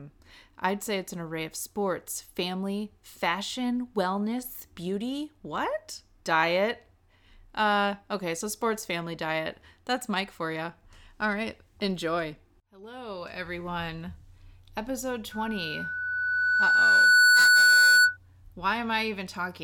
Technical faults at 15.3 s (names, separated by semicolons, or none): loudspeaker feedback squeal